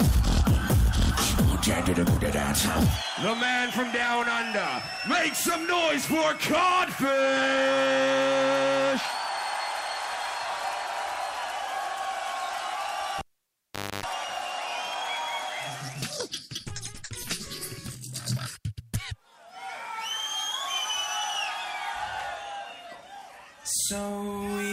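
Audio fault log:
13.19–14.04 s, cable pulled and plugged in: a live connector is withdrawn and then reseated, breaking the signal path for about 0.81 s. The break opens with a sharp pop as the circuit is interrupted, followed by near silence while nothing is connected. As the plug goes back in, only its tip makes contact at first, so a 50 Hz mains buzz leaks through for about 0.27 s. A second pop then marks full contact as the sound returns.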